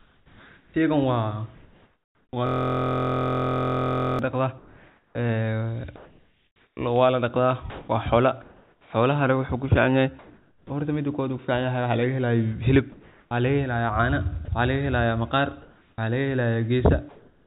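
From 0.0 to 10.7 s the speech is chopped by the voice detector, most likely: quiet syllables and word edges drop out and about 4.8 s in total is replaced by synthetic comfort noise. Unlike packet loss, the gaps fill with a flat hiss instead of silence or a smeared repeat.

From 2.47 to 4.19 s a system hang loop takes over. A single 23.22 ms fragment, which fits a 1024-sample buffer, repeats exactly, giving a steady buzz at 43.1 Hz. It sounds like a fixed-pitch drone rather than a stutter, which separates it from ordinary dropouts.

From 12.92 to 17.47 s the likely voice-detector chopping returns, with about 1.2 s swapped for comfort noise. Throughout, the call path carries nothing above 4 kHz, as its narrowband codec would.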